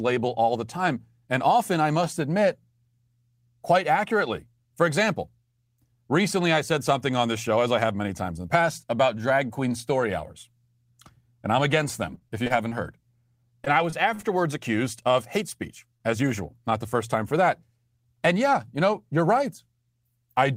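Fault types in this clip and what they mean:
Repeated packet loss (robotic sound): From 12.15 to 12.79 s, just after "I'm against", and again from 13.65 to 14.25 s, just before "accused of hate speech", the speech turns choppy and machine-like. Holes in the stream arrive in quick succession, each patched by extending the preceding sound, so concealment fills about 18 and 16 percent of those stretches. The longest holes are 25 ms and 47 ms, and pieces of speech drop out between the patches.
Short concealed packet loss: At 15.97 to 16.02 s, between "accused of hate speech" and "as usual", a single brief hole of roughly 20 ms in the incoming audio is bridged by about 22 ms of synthesized continuation, drawn from the pitch of voiced speech or from shaped noise, before the real signal resumes. This isolated repair is heard as a fleeting smear or wobble rather than the sustained robotic texture of the earlier stretches.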